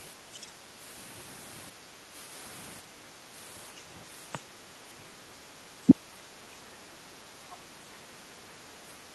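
From 0.34 to 0.46 s a faint second voice sits beneath the speech, roughly 35 dB below it. This is likely the other side's voice leaking through: loudspeaker playback reached the microphone and the echo canceller did not fully remove it.

Between 1.86 and 2.1 s the room tone dips by up to about 7 dB, for roughly 150 ms in total. This is background gated by the echo canceller, which clamped the microphone while the loudspeaker was active and then released it.

At 4.32 to 4.39 s the speech drops by roughly 15 dB. At 4.96 to 5.06 s it all but disappears, falling by around 40 dB for about a tenth of a second. Both are likely speech suppressed in double talk, with the canceller attenuating the talker along with the echo it could not separate.

A second, shorter background gating dip of about 6 dB follows at 6.96 to 7.07 s. At 7.51 to 7.56 s a brief, very low scrap of the other side's voice leaking through returns, again likely residual echo.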